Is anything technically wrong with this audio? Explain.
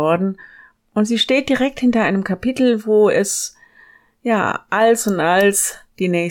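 Yes. From the start to about 2.96 s the speech sounds dulled at the very top end. This is channel delay (comb filtering): one channel lags the other by roughly one sample, so summing to mono cancels content near 20 kHz.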